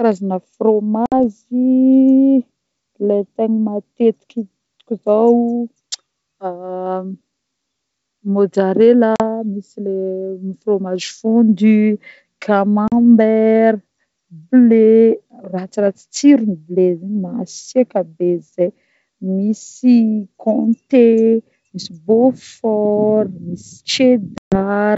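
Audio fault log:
1.06–1.13 s, 9.16–9.22 s, 12.88–12.93 s, 24.38–24.60 s: packet loss on an ADPCM call. The speech drops to hard-edged silence. About 60 ms is missing in the first gap, 40 ms in the second and third, and 140 ms in the last, which fits a few packets and then a longer run of them. After each hole the decoder's predictor and step size no longer match the sender's. So the speech resumes with brief, slight distortion before settling. Around the gaps, the G.722 wideband sound stays clear.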